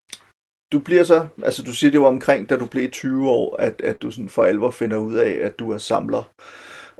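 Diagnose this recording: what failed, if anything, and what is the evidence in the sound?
The failure is at the network stage: a short concealed packet loss at 3.95 to 4.02 s. About 40 ms of the call audio failed to reach the decoder in time, and the receiver covered the gap by extending the preceding sound, carrying its pitch forward where it was voiced or substituting shaped noise where it was not, before crossfading back into the real signal. The patch runs about 44 ms and is audible as a brief smear in the speech. The call codec path, whose top end stops near 12 kHz, is not implicated in the dropout.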